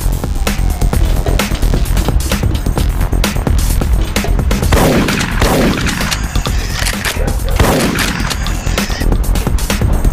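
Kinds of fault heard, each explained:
DECT cordless phone buzz: A DECT handset or base station close by sends short radio bursts, one every 10 ms. The audio circuit picks them up and rectifies them into the signal. Here it sounds as a steady, thin buzz at 100 Hz, rich in harmonics. It runs from the start of the clip to 2 s, then stops. It sits well below the main audio, about 25 dB down.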